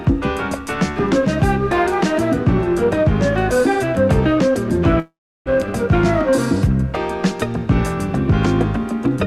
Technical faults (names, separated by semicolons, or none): call audio freeze